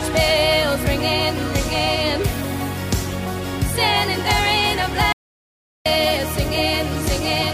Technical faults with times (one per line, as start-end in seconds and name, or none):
5.13-5.86 audio dropout to silence